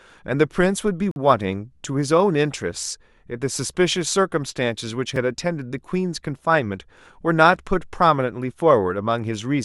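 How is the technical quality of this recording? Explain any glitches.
Two brief dropouts in the speech, both a gap between stream segments. At 1.11 to 1.16 s and at 5.16 s, the segment timestamps, four seconds apart, leave holes the player fills with silence: a hard-edged 47 ms cut, then a tiny 4 ms tick. No audio is actually lost.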